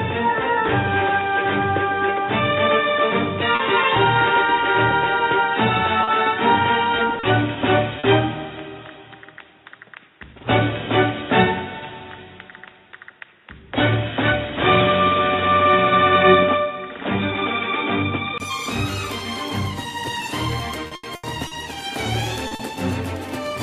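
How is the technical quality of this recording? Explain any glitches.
The recording has several clear faults: a narrowed, dull stretch at the start and a series of network dropouts.

From the start to 18.4 s, the audio is band-limited with nothing above 3.8 kHz, then opens up after a 20 ms silence, with a level shift of a few dB and a change in the noise floor, which sits roughly 45 dB down. The likely cause is an input switched to a poorer device. A codec limit would not come with this sudden change in tone, level and noise at one point.

At 3.55, 6.03, 7.19, 7.99, 22.47 and 22.55 s, short concealed packet loss leaves 40 ms holes patched by extending the preceding sound. Each is heard as a brief smear or wobble, and the last two come almost back to back.

From 20.87 to 21.54 s, repeated packet loss produces a robotic sound. Four gaps, the longest 80 ms, are concealed one after another and cover 36% of the span. 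The result is a sustained choppy texture, not a single blip.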